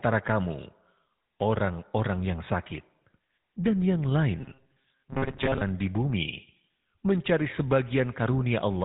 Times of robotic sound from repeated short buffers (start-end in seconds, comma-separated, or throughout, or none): 4.41-5.61